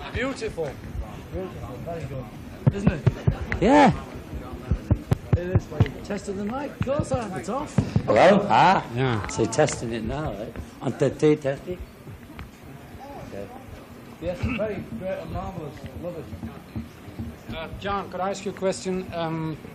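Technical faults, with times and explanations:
2.14, 3.15, 4.14, 5.13, 6.12, 7.11 and 8.10 s: overlap between stream segments. Roughly once per second, neighbouring one-second segments claim the same time. The player discards the overlap, so 6 to 18 ms of real audio vanishes. The waveform jumps, giving a small click or skip.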